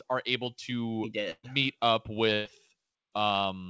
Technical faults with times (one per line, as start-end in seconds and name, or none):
1.31-1.46 burst of packet loss
2.33-2.48 burst of packet loss